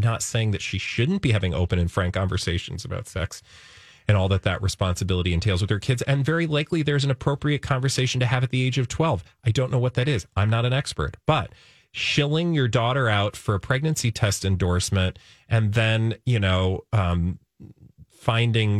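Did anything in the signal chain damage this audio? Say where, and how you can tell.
No, nothing along the signal chain has left an audible mark on this speech recording, from the analogue front end through conversion, processing, storage and playback.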